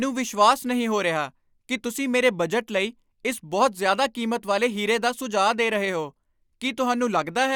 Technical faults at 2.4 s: none

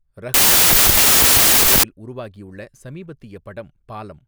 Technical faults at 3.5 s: none

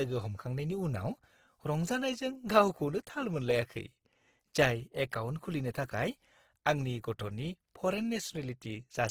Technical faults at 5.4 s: Opus compression

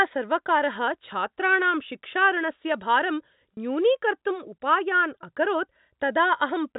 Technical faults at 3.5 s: packet loss with pitch repetition

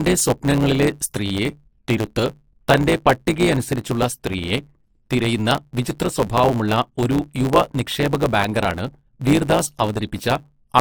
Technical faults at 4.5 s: generation loss; block size mismatch (truncated)

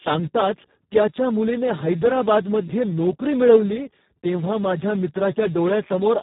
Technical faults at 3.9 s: Speex codec

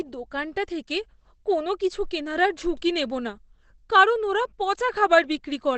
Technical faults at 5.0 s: Opus compression

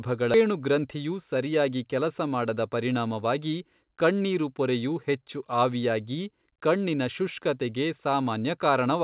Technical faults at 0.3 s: skip ahead

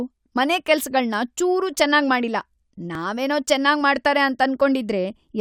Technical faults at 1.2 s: none

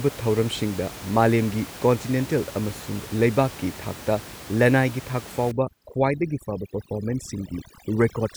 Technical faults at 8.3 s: overdone noise removal

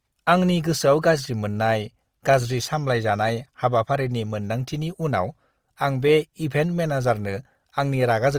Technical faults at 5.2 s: Opus compression

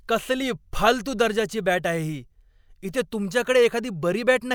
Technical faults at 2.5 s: none

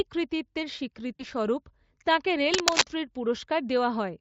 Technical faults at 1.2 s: VoIP packet loss concealed by the speech codec

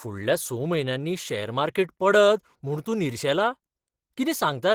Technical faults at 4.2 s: Opus compression

